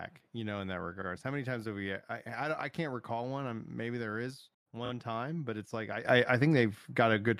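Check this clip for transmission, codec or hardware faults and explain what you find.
Two kinds of fault are present: repeated frames at two points and a sudden gain jump near the end.

Repeated frames occur at 1.01 to 1.06 s, where a 52 ms block plays twice, and at 4.85 to 4.90 s, where a 26 ms block plays three times. The decoder replays the same compressed data, so each spot stutters briefly. Each adds 52 ms to the length.

A sudden gain jump at 6.05 s raises the level by about 10 dB, and it stays there to the end. Speech and background noise step up together in a single sample. The likely cause is a gain setting applied without a ramp.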